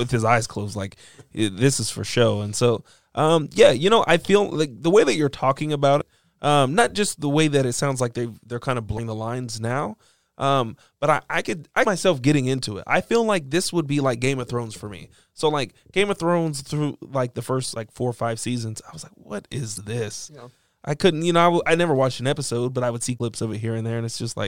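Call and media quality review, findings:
Damaged data in a compressed stream. Five short glitches, each about 40 to 50 ms. At 5.97–6.02 s, after "way that you're talking" and before "um not just the". Then 8.95–8.99 s and 11.82–11.86 s. At 19.74–19.78 s after "was like what is". At 23.16–23.21 s after "never watched an episode". Component: decoder input. Corrupt bytes in the stream. Frames misread, sync lost, decoder skips ahead to the next valid frame header.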